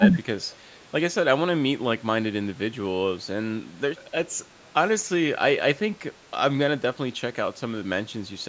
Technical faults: speech suppressed in double talk

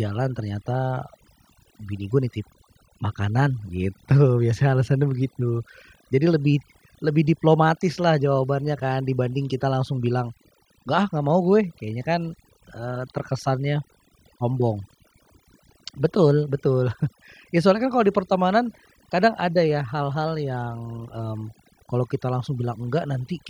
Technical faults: overdone noise removal

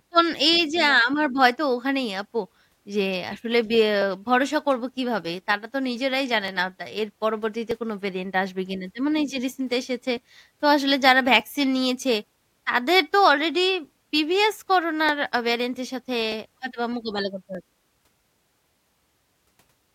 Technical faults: clock drift buffer slips

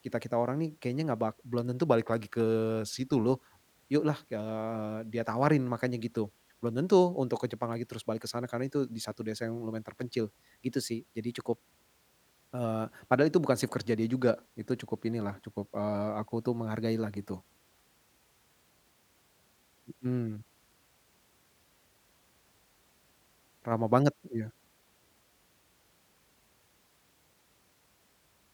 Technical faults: drift correction step

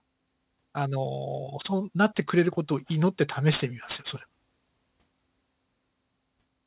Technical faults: aliasing

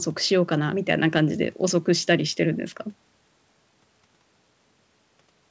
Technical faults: none

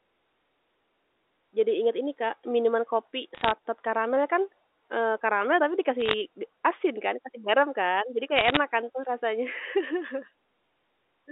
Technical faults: bit errors on a digital phone line

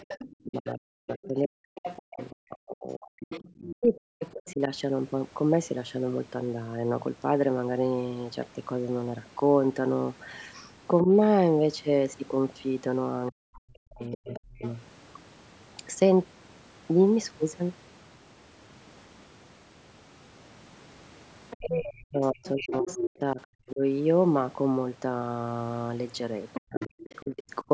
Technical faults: other side's voice leaking through; speech suppressed in double talk

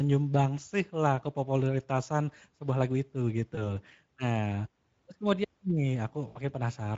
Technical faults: Speex codec; VoIP packet loss concealed by the speech codec

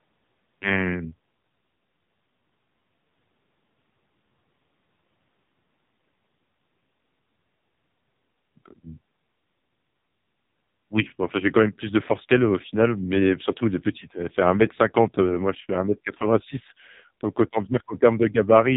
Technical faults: AMR narrowband mobile codec

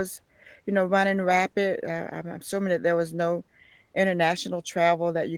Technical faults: Opus voice compression

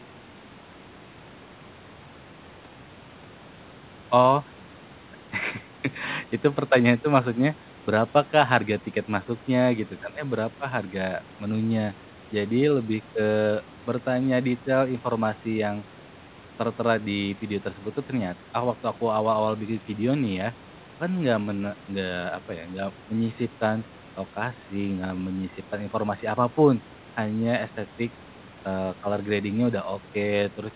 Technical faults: none

